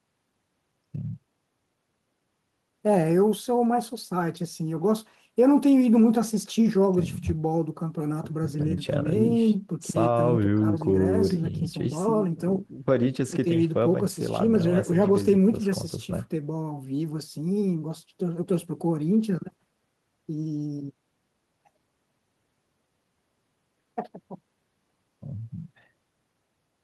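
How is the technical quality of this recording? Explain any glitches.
No glitches or technical faults can be heard anywhere.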